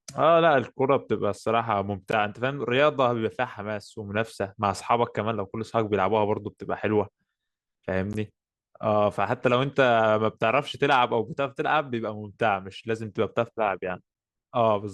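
Speech with a gap between stream segments: brief hard-edged silences at 2.11 s and 8.13 s, about 15 ms and 13 ms, six seconds apart, where segment timestamps leave holes.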